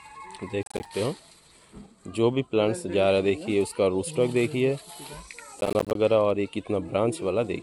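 Processor overload crackle occurs from 0.63 to 0.85 s and from 5.61 to 5.95 s. Around fifteen missed buffers of roughly 10 ms each drop to silence, producing gritty, hard-edged crackle.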